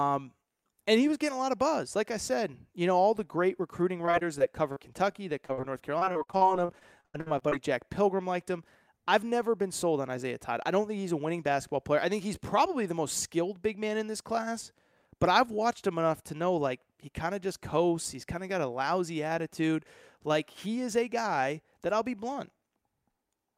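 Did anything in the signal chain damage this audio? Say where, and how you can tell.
Yes. Repeated packet loss at the network stage hits the speech from 4.05 to 7.53 s: 22 gaps, the longest 79 ms. Each hole is bridged by stretching the preceding sound, covering about a fifth of that span. This leaves the voice choppy and robotic, with fragments missing.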